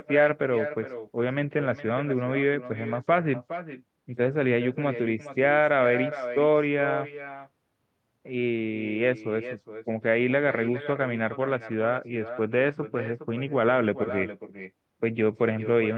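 Throughout, echo with no canceller: far-end loudspeaker re-enters its microphone, returning speech roughly 0.4 s later, about 11 dB down, a discrete repeat, not reverb.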